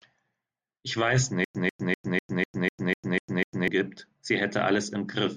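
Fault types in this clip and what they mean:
Stutter with silent gaps: From 1.44 to 3.68 s, a 144 ms burst of speech repeats nine times. Each repeat is followed by 104 ms of digital silence, a steady 248 ms cycle. A stalled stream likely replayed its last fragment. The speech due then is lost.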